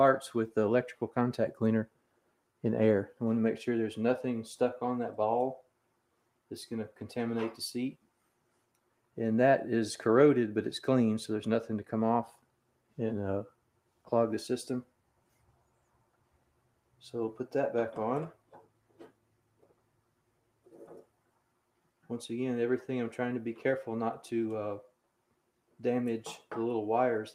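Sound cut by the noise suppressor occurs at 1.87–2.39, 5.62–6.51, 8.02–9.17, 12.33–12.98, 13.5–14.07, 14.85–17.01, 18.34–20.69 and 21.04–21.4 s. The suppressor treated parts of the audio as noise and pulled them down by up to about 12 dB, so they sink in level.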